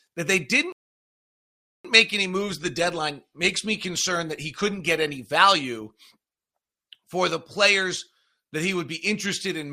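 At 0.72 s, right after "that they", playback hits a rebuffering stall: the player's downloaded audio runs out, so the speech drops to silence until data arrives. It resumes at 1.85 s on "make any moves the", exactly where it stopped, nothing missing, adding 1.12 s.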